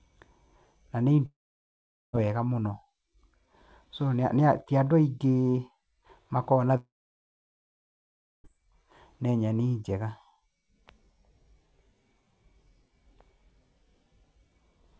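It's a speech clip with two gaps where the sound briefly trails off as a fading buzz or hiss and then goes quiet: about 0.9 s lost from 1.26 to 2.15 s, and about 1.7 s from 6.77 to 8.46 s. That pattern is likely a long network dropout, with the audio resuming past the lost stretch. The call codec leaves nothing above 8 kHz.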